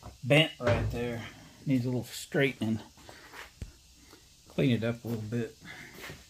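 Sharp single clicks sound at 0.37, 1.18, 2.04 and 5.14 s. Each is likely from dropped samples: a fraction of a millisecond goes missing. The waveform then jumps straight to a later value. Nothing audible is lost. Only the abrupt step clicks.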